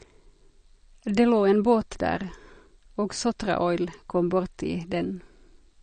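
Across the whole speech clip there is plainly audible damage of the kind MP3 compression leaves, likely from an encoder starved of bits, which fits a low bitrate near 40 kbps. Nothing sounds above 9 kHz, so sibilants lose their top, and weak detail flickers in and out between frames, giving a watery, swirling texture and metallic chirps on s sounds. A simple low-pass filter would dull the treble without that shifting, bubbling residue.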